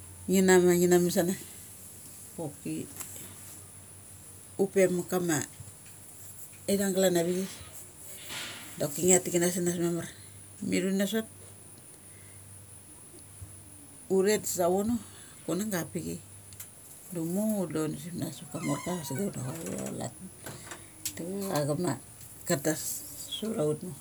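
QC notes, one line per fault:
Throughout: mains buzz. A steady, raspy buzz sits under the speech for the whole clip, roughly 30 dB below it. Sharp switching spikes twice per 50 Hz cycle leak in, likely through a dimmer, rectifier or missing shield. Their harmonics stack up into kilohertz range.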